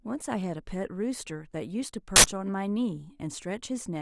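At 2.16 s the speech is cut by a harsh, loud burst of digital noise lasting about 80 ms, ending at 2.24 s. This is an uninitialised buffer: a block of audio was sent to the output before any samples had been written into it, so whatever leftover data sat in that memory was played as sound. The burst's length points to a single buffer of roughly 80 ms going out unfilled.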